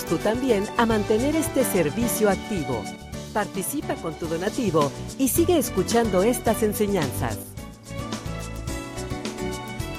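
At 2.96 s the sound drops abruptly by about 6 dB and stays quieter until 4.47 s, when it jumps back to full level. The same sudden dip returns from 7.43 to 7.91 s. Both are likely one channel dropping out: with one side of the stereo pair gone, whatever both channels shared loses half its contribution in the mono sum, and anything carried only by the missing side vanishes until it returns.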